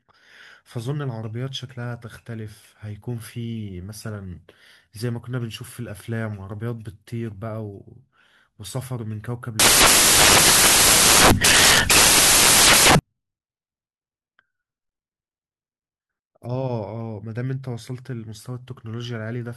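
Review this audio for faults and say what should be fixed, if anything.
From 9.60 to 12.99 s the samples are built from the wrong bytes, so misordered or misaligned bytes turn into loud broadband noise: a dense waveform block and flat spectrogram wash. Fix it by setting the decoder's byte order and sample alignment to match the stream's actual format.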